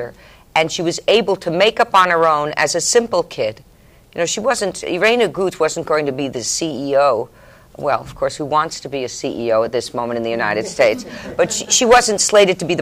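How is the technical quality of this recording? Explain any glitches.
Nothing stood out on listening to the recording, and there are no glitches to explain.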